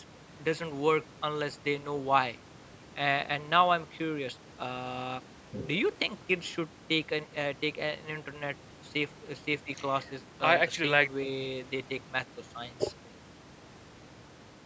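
No technical faults are present.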